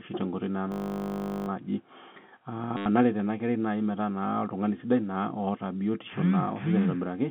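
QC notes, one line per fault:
0.72–1.48 s: system hang loop. One 20 ms slice of audio repeats exactly, about 38 times, for roughly three quarters of a second. The looping happens at 50 Hz, so it sounds like a steady buzz rather than a stutter. The short cycle suggests the driver froze while the hardware kept replaying a 20 ms ring buffer. Little or no audio appears to be skipped when playback resumes, so the sound picks up where it stopped.
2.77–2.86 s: packet loss with last packet repeated. About 90 ms of audio is missing. In its place, the last good packet plays over and over until fresh data arrives. The repeats seldom line up with the pitch of the voice. The burst buzzes at about 100 Hz, which suggests 10 ms packets, and gives a brief robotic stutter. The band stays limited to 150 Hz–3.4 kHz, as expected from the G.711 telephone coding.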